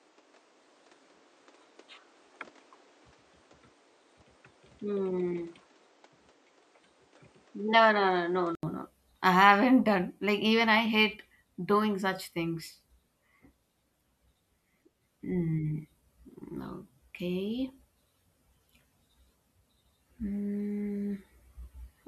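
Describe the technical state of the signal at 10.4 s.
At 10.4 s the speech signal is intact, with no audible technical fault at that moment.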